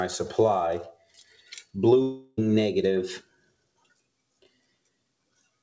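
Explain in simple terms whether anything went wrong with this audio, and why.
Sound cut by the noise suppressor, from 0.92 to 1.75 s and again from 3.21 to 3.91 s: the call's noise filter mistook parts of the sound for background noise and turned them down, so they dip noticeably in loudness.

Long network dropout, from 2.02 to 2.39 s: about a third of a second of audio is missing, likely lost in transit. The receiver covered the gap by stretching the last sound into a fading buzz, then resumed without the lost part.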